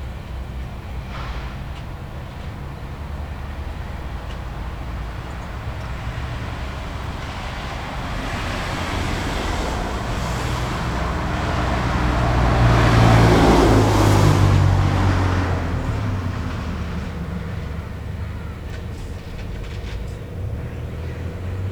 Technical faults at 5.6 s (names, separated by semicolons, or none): none